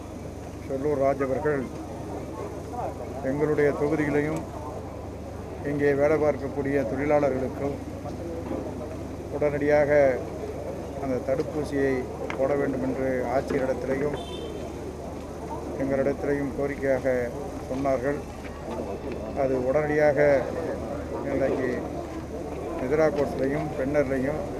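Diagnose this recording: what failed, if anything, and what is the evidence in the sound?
Nothing failed; no faults heard.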